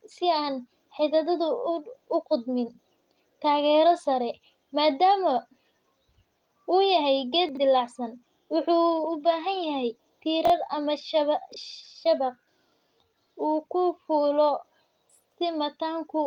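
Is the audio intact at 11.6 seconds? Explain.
No. From 11.52 to 11.56 s the chunks are out of order: one 21.33 ms chunk plays a chunk late, swapping with its neighbour. Unlike a dropout, nothing is missing; the sound is all there but jumbled, with three hard joins.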